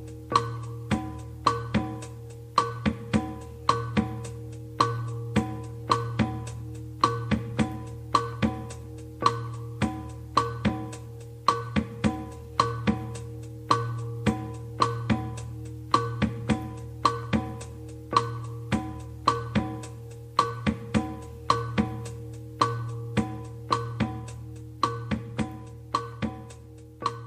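Nothing stood out on listening to this audio.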